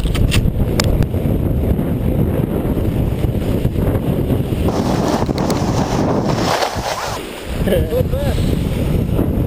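At 4.68 s the audio jumps into a section at the wrong speed, running about 1.87 times too fast until 7.17 s. Pitch climbs roughly ten semitones with it, so everything sounds high and rushed, likely from that stretch being played against the wrong clock.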